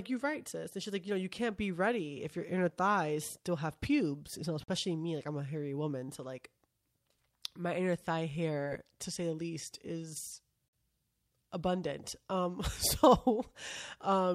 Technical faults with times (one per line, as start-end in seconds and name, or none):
4.64-4.68 gap between chunks
8.64-8.68 short concealed packet loss
10.68-10.73 gap between chunks